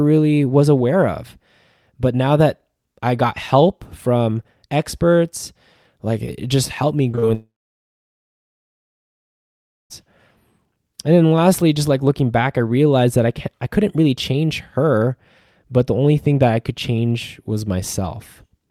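Short concealed packet loss occurs three times at 7.11, 7.15 and 7.19 s, with 20, 20 and 40 ms missing. Each gap is patched into a brief smear, not silence. A long network dropout is the likely cause of the stall from 7.34 to 9.92 s. The patched sound fades into about 2.4 s of silence, and speech then resumes without the lost part.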